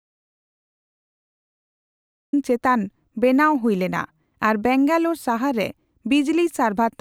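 From the very start until 2.33 s the recording is dead silent, with no room tone at all, and the speech then enters mid-flow on "ᱪᱮᱛᱟᱱ ᱵᱮᱱᱟᱣ ᱦᱩᱭᱞᱮᱱᱟ ᱟᱨ". This is an audio dropout to silence, likely a lost input while zeros kept being written, so anything said earlier is gone.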